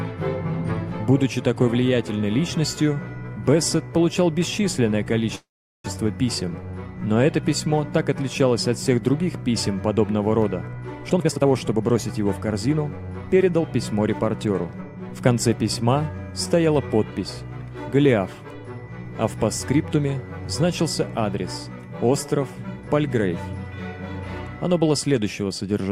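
At 5.35 s the audio stalls until 5.86 s. This is a call audio freeze. The last sound carries on briefly as a fading buzz or hiss, then about 400 ms of silence. The likely cause is delayed packets emptying the jitter buffer. Playback resumes where it stopped, with nothing lost.

From 11.08 to 12.75 s a jitter buffer speed-up follows. The receiver trims small pitch-period slices repeatedly to shed the built-up delay. Playback runs at 129% speed with unchanged pitch. Roughly half a second is removed, and the passage sounds hurried.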